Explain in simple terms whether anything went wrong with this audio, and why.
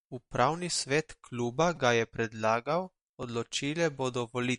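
The speech has a dull, watery quality throughout, with nothing above about 11 kHz, which is likely MP3 compression squeezing it hard and cutting the treble. There are two repeated buffer glitches, where a tiny slice of audio about 5 ms long got replayed because fresh audio arrived late. At 1.76 s, right after "svet kluba" and before "ga je predlagal", it plays three extra times and gives a short buzzy click. At 3.23 s, after "kluba ga je predlagal", it repeats once, making a click.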